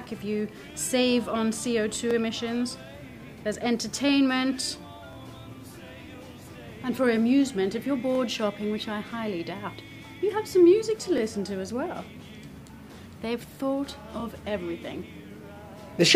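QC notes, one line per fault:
2.11–2.13, 5.13–5.15, 8.15–8.18, 11.18–11.20 and 14.20–14.22 s: overlapping chunks. The audio runs in 3.0 s chunks. Each chunk starts before the last one ended. So 23.22 ms plays twice at every join, heard as a regular click or stutter.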